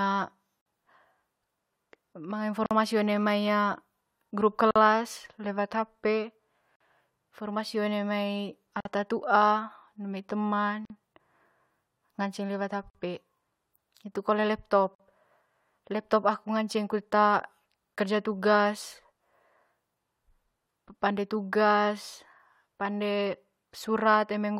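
In this speech there's a gap at a join of encoded pieces, a roughly 48 ms dropout at 0.61, 2.66, 4.71, 6.76, 8.80, 10.85, 12.90 and 14.95 s. Two-second chunks were encoded separately and butted together, leaving each one's start delay and end padding in as silence.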